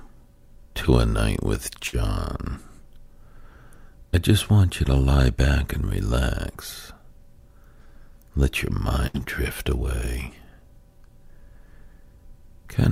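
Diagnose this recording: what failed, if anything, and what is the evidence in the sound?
At 1.87–1.96 s and 9.07–9.17 s the sound freezes into a fading tail, then skips ahead: a network burst of packet loss, concealed by extrapolation.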